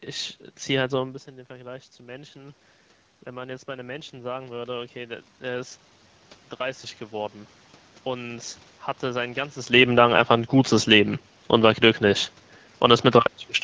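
From 3.26 s to 5.84 s the automatic gain is rising: the input level has dropped by about 15 dB, and the gain control answers by turning itself up by about 6 dB over those two and a half seconds. The speech and the room noise swell together. On a waveform the envelope grows steadily through that span, and on a spectrogram the background noise floor brightens in step with the speech.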